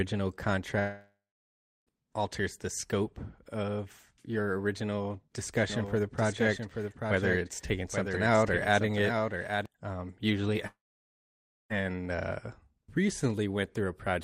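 From 0.79 to 1.90 s the speech breaks off in a long network dropout. About 1.1 s of audio never arrives, likely through packet loss on the link. The receiver stretches the last sound into a brief fading buzz, and then about 0.7 s of near-silence remains. The speech resumes further on, with that stretch gone.

Between 5.70 and 9.66 s a doubled audio track appears. A second full-band copy of the speech runs around 0.7 s behind the original and about 5 dB quieter, with no reverberant tail or room colouring. It starts and stops abruptly at those two points, which likely points to a slower second capture path being mixed in alongside the direct one.

A second long network dropout runs from 10.67 to 11.73 s, likely from the same kind of packet loss. About 1.04 s is lost. A short concealment buzz fades quickly into roughly 0.94 s of silence before the speech returns, again without the missing portion.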